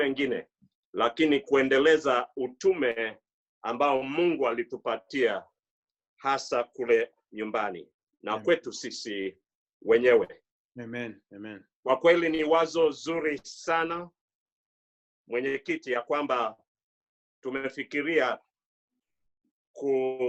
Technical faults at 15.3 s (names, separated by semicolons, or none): none